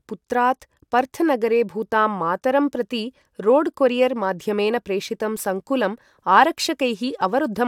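No technical faults can be heard anywhere in the speech recording; the signal stays continuous and stable throughout.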